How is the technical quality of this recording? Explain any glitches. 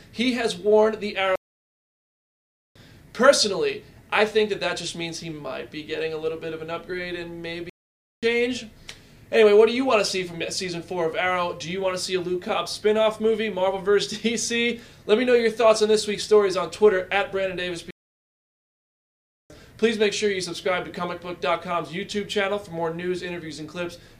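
Three playback stalls interrupt the audio: at 1.36 to 2.76 s (1.4 s), 7.70 to 8.23 s (0.53 s) and 17.91 to 19.50 s (1.6 s). Each time the sound cuts off mid-flow into dead silence, then resumes. The likely cause is the player starving for data or its thread blocking. On a waveform these are flat lines, and on a spectrogram they are blank vertical bands.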